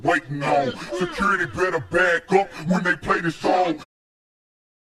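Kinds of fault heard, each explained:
No faults can be heard.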